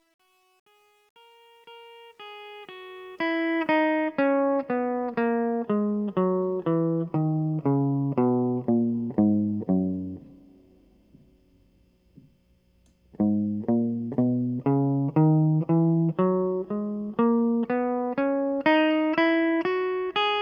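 A music clip whose fade-in, from the start to 3.76 s, suffers truncation distortion: the fade stage kept too few bits without dither, around 10 by the sound of it, so the quiet opening to about 2.49 s turns gritty before the ramp grows cleaner.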